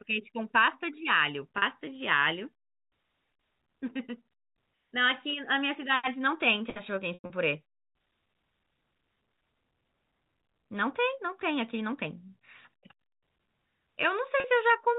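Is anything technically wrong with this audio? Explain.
Yes, there's packet loss with pitch repetition in three places: 40 ms gaps at 1.58 and 14.40 s that sound briefly held and buzzy, and a rougher patch from 7.14 to 7.30 s where the receiver repeats the last pitch cycle until it fades toward silence. The band-limited telephone sound is just the G.711 line itself.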